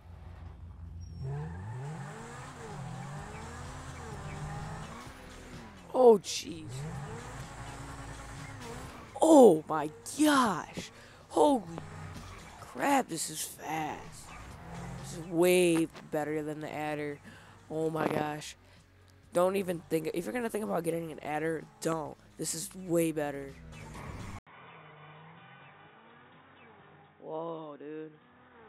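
At 24.39 s the audio cuts out for 80 ms, then returns about 10 dB quieter and with nothing above 3.8 kHz, sounding dull and boxy until the end. A new background noise also appears, roughly 35 dB below the signal. The likely cause is an input switched to a poorer device, such as a headset's call profile. A plain bandwidth drop or low-pass filter would not bring this together with a short gap, a level step and a fresh noise floor.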